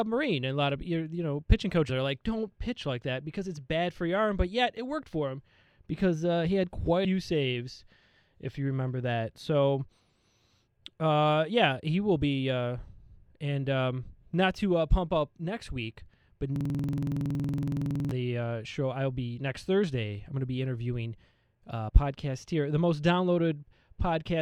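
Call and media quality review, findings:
Call and media quality review, findings:

Damaged data in a compressed stream: short glitch at 1.88 s and 7.04 s, and a slightly longer one at 21.88–21.90 s. Corrupt bytes in the coded stream; the decoder misreads the frame, loses sync and resumes at the next header, giving a brief glitch.

System hang loop: 16.56–18.11 s, one 46.44 ms slice of audio repeating about 33 times at 21.5 Hz. The host or driver stalled while the audio hardware kept replaying the same ring buffer segment, which fits a 2048-sample buffer.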